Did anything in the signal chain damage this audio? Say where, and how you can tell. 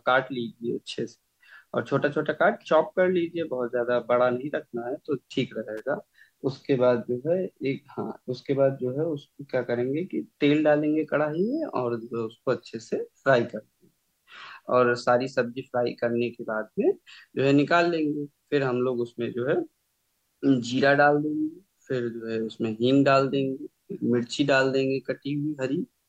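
Yes. A sharp snap sits on top of the speech from 5.77 to 5.79 s, peaking around -30 dBFS. This is an electrical switching spike, likely from a nearby switch, motor or static discharge arcing and coupling into the analogue wiring as a brief burst of interference.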